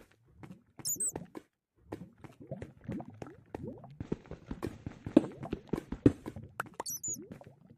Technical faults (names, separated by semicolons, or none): overlap between stream segments